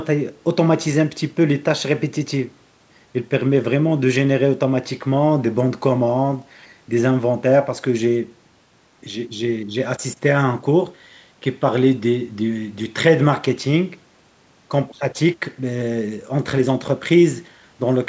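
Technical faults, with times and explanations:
No technical faults, so there are no times or explanations to give.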